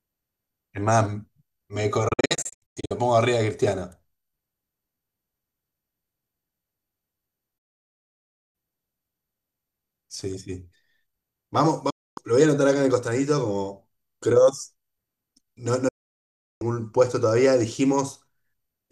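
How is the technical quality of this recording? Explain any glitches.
The speech suffers repeated digital broadcast dropout at 2.08–2.91 s (scattered short holes), 7.58–8.55 s, 11.90–12.18 s and 15.88–16.62 s. The receiver mutes corrupted frames with 8 ms fades, so those stretches are lost. They show as flat waveform and blank vertical gaps on a spectrogram.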